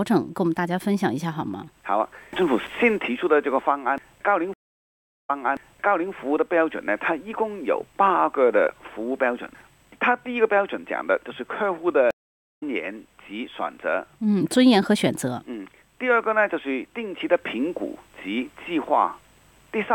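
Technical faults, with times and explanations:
4.54–6.12 s, stream reconnect: the audio drops out for about 0.75 s, then a fresh decoder picks up 0.84 s earlier, so you hear a stretch repeat.
12.11–12.63 s, stream reconnect: another break, about half a second of silence, and the audio resumes a little under half a second later, skipping ahead.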